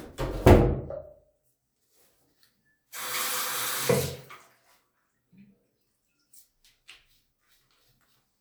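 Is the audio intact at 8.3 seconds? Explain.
Yes, the audio is intact at 8.3 seconds, with no fault present at that moment.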